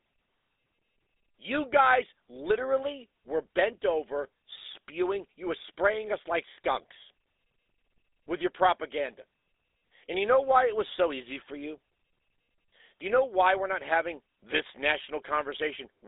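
From start to finish the speech has passed through the GSM full-rate codec. The coder models the vocal tract as a filter and excites it with regularly spaced pulses, keeping only every third excitation sample, at a rate that fits 13 kbps. The line band runs from 300 Hz to 3.6 kHz, so the sound is thin and lacks both low body and upper presence. The pulse excitation leaves a plainly audible buzzy, gravelly roughness on every voiced stretch.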